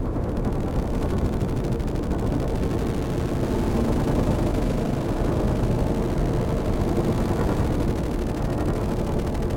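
From 3.43 to 7.64 s the sound carries a doubled audio track: a second full-band copy trails about a tenth of a second behind, roughly 5 dB quieter, with no decay or room colour, and it starts and stops abruptly. The likely cause is a slower second capture path or an edit holding two misaligned copies.

At 9.11 s compressed frames are skipped: whole frames were missing or rejected by the decoder, so playback jumps ahead by a few tens of milliseconds of audio, which fits about ten frames dropped together, leaving an abrupt short discontinuity at the join.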